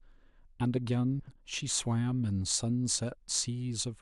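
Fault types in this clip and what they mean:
frames out of order: Between about 1.20 and 1.40 s, two neighbouring 80 ms blocks play in swapped order, which fits two runs of four frames each, so the speech briefly flutters and garbles, and no time goes missing.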